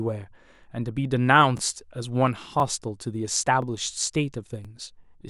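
At 0.55, 1.58, 2.60, 3.62 and 4.65 s the speech stutters briefly, a symptom of overlapping chunks. The audio was handled in 1.0 s chunks, each starting before the previous one ended, so about 23 ms repeats at every join and sounds like a regular click.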